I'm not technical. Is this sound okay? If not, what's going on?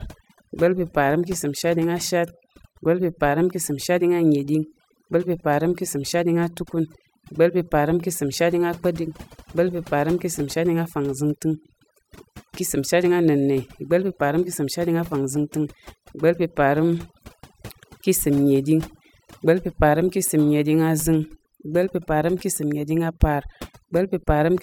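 No. Overdone noise removal, set too strong, is cutting away quiet parts of the speech throughout, leaving near-silent gaps with twinkling specks.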